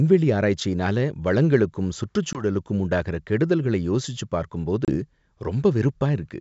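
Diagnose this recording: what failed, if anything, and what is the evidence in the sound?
The network stage dropped packets on an ADPCM call (G.722 at 64 kbit/s, whose wideband speech is clear up to 7 kHz). Hard-edged silent holes appear at 2.33–2.43 s, after "ஆராய்ச்சியினால வளங்களுக்கும்" and before "உண்டாகுற கெடுதல்களை யோசிச்சுப்", and at 4.85–4.96 s, after "உண்டாகுற கெடுதல்களை யோசிச்சுப்". The gaps point to roughly two and three lost packets. Because silence replaced the missing data, the decoder's adaptive predictor and step size drift out of step with the sender's, so speech resumes slightly distorted before resynchronising.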